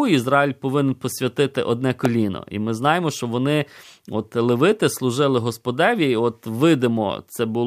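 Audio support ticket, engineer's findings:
Sharp single snap at 2.05 s, just after "повинен посвятити одне", lasting about a millisecond and peaking around -5 dBFS. Likely an electrical switching spike: a nearby switch, motor or static discharge arcing, with the line or input stage picking up the burst and adding it over the speech. Check grounding, cable shielding and nearby switched loads.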